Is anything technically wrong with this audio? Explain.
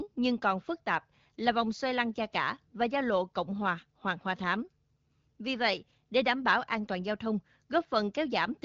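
No, nothing's wrong here: it's speech carried over the AMR wideband (HD Voice) codec at 12.65 kbit/s, a rate where that codec keeps speech clear.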